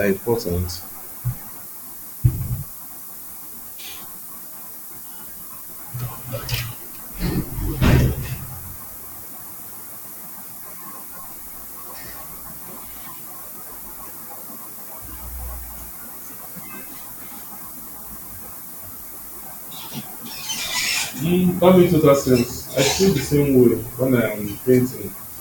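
From start to finish there's low bit depth with noise shaping. The speech sits on about 7 bits, and the rounding error gets pushed up into the treble, so you hear a steady, thin hiss climbing toward the top, only around 10 dB below the speech.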